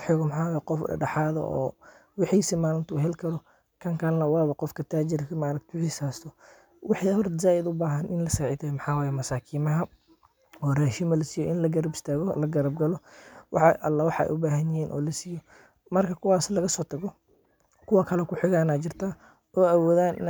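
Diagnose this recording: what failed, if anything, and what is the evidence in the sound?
Nothing in the signal chain has failed: the speech arrives as one continuous signal with no audible breaks, distortion, level problems or timing errors from any stage of the chain.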